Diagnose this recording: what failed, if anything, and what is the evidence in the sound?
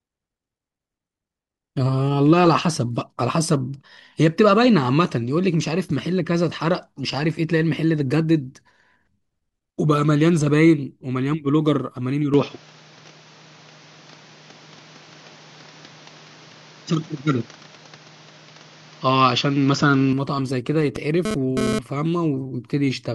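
From 12.34 to 20.13 s the speech suddenly loses everything above 7.2 kHz, shifts level by a few dB and picks up a new, faint noise floor, all with no gap. That's likely the input switched to a poorer device at the driver stage.

From 20.96 to 21.79 s there's a harsh, raspy GSM phone buzz at a 217 Hz rate, loaded with harmonics and only about 2 dB under the speech, stuttering on and off. A nearby phone moving data is pulsing, and the analogue wiring is rectifying those bursts.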